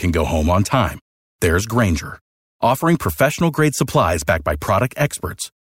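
No technical faults can be heard in this speech recording.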